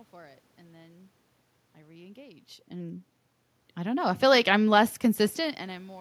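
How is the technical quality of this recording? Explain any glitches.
Nothing stood out as a glitch on listening; the background room noise and the changes in level around 2.5 and 5.5 seconds, where the talker moves relative to the microphone, belong to the recording itself rather than the system.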